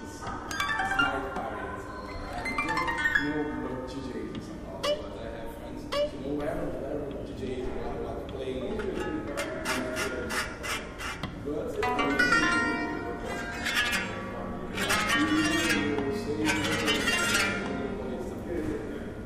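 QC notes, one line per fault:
Throughout, video or display buzz: a steady 60 Hz buzz with a layer of gritty hash riding above it sits about 25 dB under the sound for the whole clip. A screen or video cable is leaking its picture signal into the audio path, so the buzz follows the display's field rate of 60 Hz. The sharp edges of that repeating video waveform carry harmonics far up the spectrum, which is why the buzz has a rasping, hashy top.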